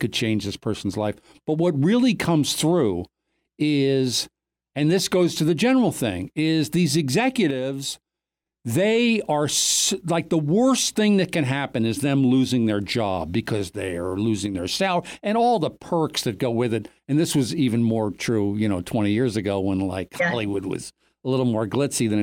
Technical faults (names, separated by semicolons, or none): one channel drops out